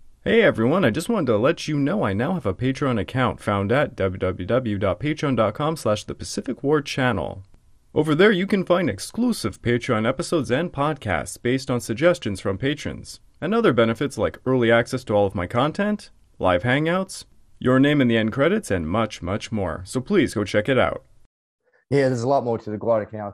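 Speech recorded through a low-rate MPEG Layer II encoder shows what is most likely MP2 compression throughout, at a rate that fits roughly 80 kbps. With too few bits, the upper sub-bands are dropped and the rest are coarsely quantised, so the voice sounds plainly dull, with a granular, gurgling roughness and top end that flickers in and out. From 5.07 to 5.23 s, just before "slash the", DAB burbling appears: reception errors at a small fraction of a percent got past error correction into the audio data across what fits about six frames, giving a brief burst of burbling over the speech.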